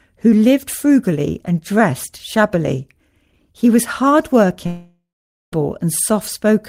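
A speech clip with one long network dropout. Just after "was hard", at 4.66 s, the sound smears into a fading buzz. Then about 0.48 s of near silence follows. Audio resumes at 5.53 s, with roughly 0.86 s missing. Lost packets are the likely cause.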